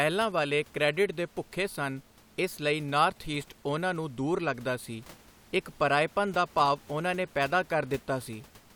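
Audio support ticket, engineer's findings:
Nothing to flag on this speech recording, just the room's own background sitting about 26 dB under the talker, which is how the space sounds rather than anything the system is doing.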